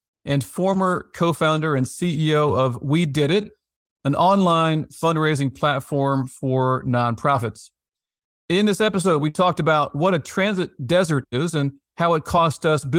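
No technical faults are audible anywhere in the recording.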